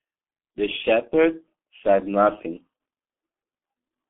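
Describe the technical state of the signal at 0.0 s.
At 0.0 s the speech already carries G.723.1 codec damage, which runs through the whole clip. The signal sits in a telephone band of roughly 200 Hz to 3.5 kHz, with nothing above 3.8 kHz. The heavy coding, consistent with about 6.3 kbit/s, rebuilds the voice from a coarse model updated only every 30 ms frame. The result is muffled, hoarse speech with smeared consonants and no sibilant brightness.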